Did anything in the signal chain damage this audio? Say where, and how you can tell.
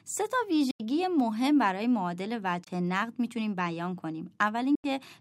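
Yes. Silent holes at 0.71–0.80, 2.64–2.67 and 4.75–4.85 s skip ahead in the speech. This is likely a Bluetooth dropout, with late wireless packets discarded.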